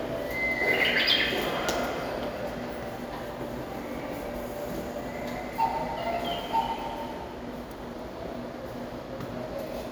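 Nothing stood out as a technical fault on listening to this recording of everyday sounds.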